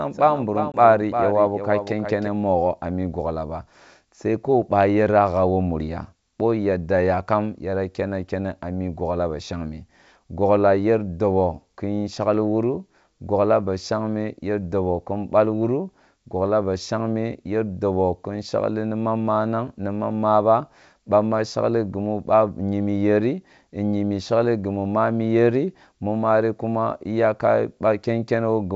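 Speech carried over a G.722 wideband call at 64 kbit/s opens with a doubled audio track. From 0.00 s to 2.28 s, already under way at the start, a full-band copy trails the original by around 0.4 s at about 10 dB lower, with no decay or room colour. The likely cause is a second, slower capture path or an out-of-step edit. On a spectrogram each syllable's pattern repeats faintly and cleanly offset, and the echo cuts off abruptly at 2.28 s, just before "nugho a migogla ba". Within that stretch, packet loss on the ADPCM call punches a 20 ms hole between 0.72 s and 0.78 s, consistent with a single lost packet replaced by silence. The waveform shows a hard-edged gap. Speech then resumes with brief, slight distortion, settling within tens of milliseconds as the decoder's predictor and step size fall back into step.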